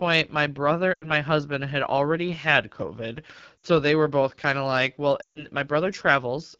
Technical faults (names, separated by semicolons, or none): AMR wideband (HD Voice) codec; lost AMR speech frames